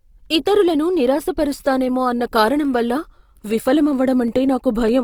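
Opus compression runs throughout the speech. The likely cause is Opus in its music (CELT) mode at a rate consistent with roughly 24 kbps. Bands starved of bits are filled with folded or noise content, so the speech sounds plainly grainy and rough, though the bandwidth stays full, reaching about 20 kHz.

Clock drift buffer slips occur from 0.68 s to 4.88 s as a regular click recurring every 0.6 s, about seven times. The likely cause is two devices whose clocks differ by a few hundred parts per million, so the buffer between them periodically drops or repeats a handful of samples.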